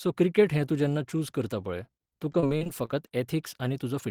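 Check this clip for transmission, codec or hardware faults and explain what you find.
One transmission fault: repeated packet loss from 2.32 to 3.11 s. Seven gaps up to 33 ms are each filled by extending the previous sound, giving choppy, robotic speech, unlike a single dropout.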